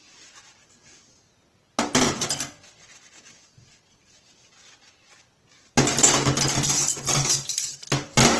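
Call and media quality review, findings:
Opus compression throughout: grainy, noisy roughness on tones rather than MP3-style swirling; bands filled, not holed; nothing above 12.1 kHz. Likely low-bitrate CELT encoding, consistent with about 16 kbps.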